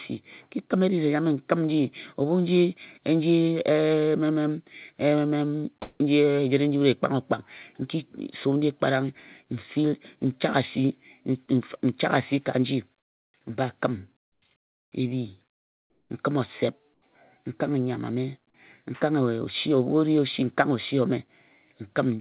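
Brief pauses in the speech lose their natural room tone and fill with a flat, featureless hiss: at 5.82 to 6.0 s, just before "ejire nji wut", where the fill jumps about 19 dB louder; then at 14.22 to 14.42 s, about 16 dB quieter; 15.5 to 16.1 s, about 9 dB quieter; and 16.94 to 17.02 s, nearly level. This is comfort noise in place of the background, likely generated by the receiver while the sender paused transmission.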